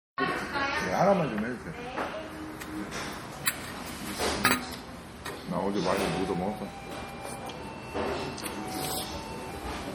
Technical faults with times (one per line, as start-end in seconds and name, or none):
0.00-9.95 low-bitrate audio saved at a high bitrate